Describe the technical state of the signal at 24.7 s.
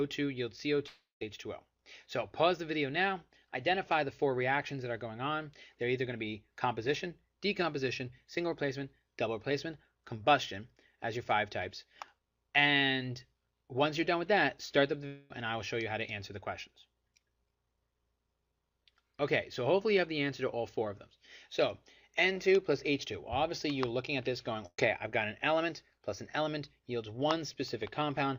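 A burst of packet loss runs from 24.66 to 24.80 s: 120 ms of audio is missing, concealed by extending the last sound as it fades, with 40 ms of silence.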